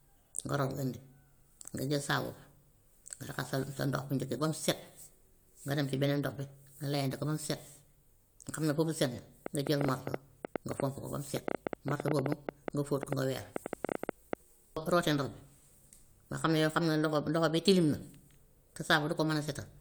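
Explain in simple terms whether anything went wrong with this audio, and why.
From 9.46 to 14.34 seconds, a train of clicks runs over the speech. About forty sharp, similar ticks arrive at 7.8 per second, spaced unevenly. They loudly stand out above the talking. The cause is likely electrical interference or a faulty connection or power supply.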